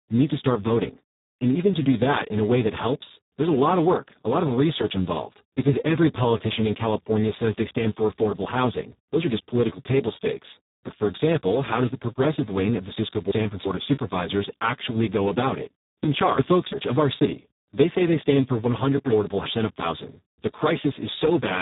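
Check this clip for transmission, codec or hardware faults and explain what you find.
Two faults are present. Throughout, the speech sounds hoarse, noisy and close to robotic, with nothing above about 3.8 kHz. This is heavy Speex codec damage, consistent with a very low setting near 4 kbps, where too few bits remain to reproduce the excitation faithfully.

At 12.97–13.65 s, 16.04–16.73 s and 19.12–19.80 s, the speech briefly jumbles. These are chunks out of order. In each span, two 0.34 s chunks play swapped because one arrived a chunk late. Nothing is lost, but there are three hard joins.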